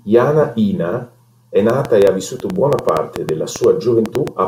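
A speech recording with two faults. From 1.70 s to 4.29 s a train of clicks runs over the sound, about 6.2 per second, around fifteen in all. The spacing is irregular. The clicks share much the same sharp shape and peak roughly 15 dB above the speech, so they tick through pauses as well as words. The likely cause is interference from nearby equipment or a faulty connection or power supply injecting repeated pulses. A sudden gain jump overlaps this stretch. At 2.39 s the level drops by about 4 dB in a single step. It returns at 2.56 s. Speech and background noise shift together, which points to the digital gain changing between one sample and the next. This was likely a setting applied instantly with no ramp.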